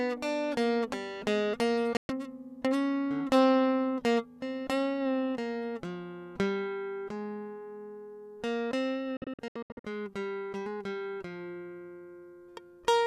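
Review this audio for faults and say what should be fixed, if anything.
Digital broadcast dropouts mute the music at 1.97 to 2.10 s and in brief scattered holes between 9.17 and 9.85 s, appearing as blank vertical gaps on a spectrogram. Stronger reception or more robust error protection would prevent them.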